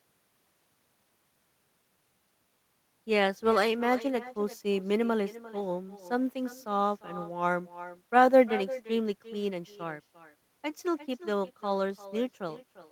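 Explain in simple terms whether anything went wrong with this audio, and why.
Something went wrong. Throughout the speech, every phrase returns about 0.4 seconds later as a quieter, thinner copy. That is echo with no canceller. The far end's loudspeaker fed its microphone, and nothing removed that sound before sending it back.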